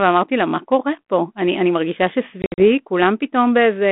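From 2.42 to 2.64 s there's packet loss on the ADPCM call: about 120 ms of audio drops out as hard-edged silent gaps scattered over roughly 160 ms, the longest lasting 60 ms, which points to around seven lost packets. After each gap the G.726 decoder's predictor and step size no longer match the sender's, so the speech comes back distorted until they resync.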